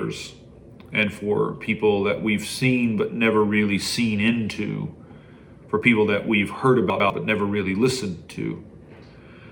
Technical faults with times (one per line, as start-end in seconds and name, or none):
6.90-7.10 chunks out of order